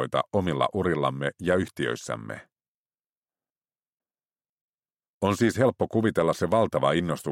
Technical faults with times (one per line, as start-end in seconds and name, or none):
3.50-4.50 chunks out of order